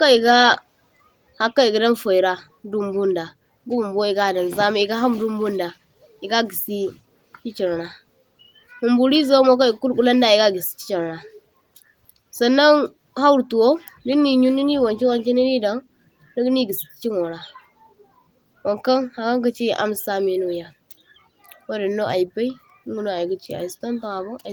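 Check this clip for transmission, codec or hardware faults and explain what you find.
No transmission, codec or hardware faults found: the speech carries Opus voice compression at 24 kbps in hybrid mode with fullband bandwidth, and the light coding damage is what that setting normally leaves.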